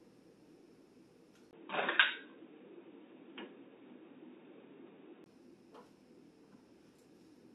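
From 1.51 to 5.26 s the sound turns dull and boxy, likely an input switched to a poorer device; the spectrogram shows nothing above 3.8 kHz, with a 20 ms gap and a level step.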